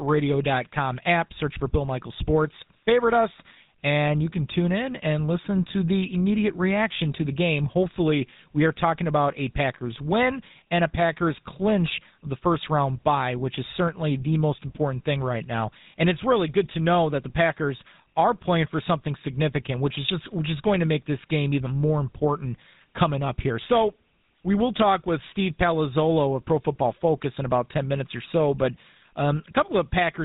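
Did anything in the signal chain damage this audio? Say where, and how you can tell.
Yes, at the codec stage, and for the whole clip: this speech has been through the GSM full-rate codec, and the damage is plainly audible. The bandwidth stops hard at 4 kHz, and the speech has a buzzy, gravelly roughness, which fits a 13 kbps full-rate stream. The codec models the vocal tract and drives it with regularly spaced pulses, keeping only every third excitation sample, which causes the roughness. On a spectrogram, the energy ends at a flat 4 kHz ceiling from start to finish.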